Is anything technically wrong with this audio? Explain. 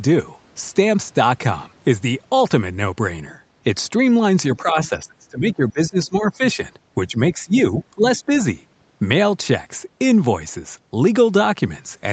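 Yes. The speech repeatedly drops away and, once, a faint second voice breaks in.

Speech suppressed in double talk occurs from 4.57 to 6.6 s, then briefly at 7.08 to 7.18 s, 7.34 to 7.53 s and 7.95 to 8.31 s. The talker's level sinks in pieces, by as much as about 20 dB in the first stretch and about 10 to 15 dB in the later ones. The likely cause is that the far side was talking at the same time, so the echo canceller couldn't tell the talker from the loudspeaker echo and turned everything down.

Other side's voice leaking through appears as a short scrap at 4.85 to 4.89 s, sitting about 20 dB below the talker, inside the first suppressed stretch. The far party's voice was likely playing from the talker's loudspeaker, and the echo canceller failed to remove all of it from the microphone signal. It comes through as a brief fragment of another voice rather than a continuous echo.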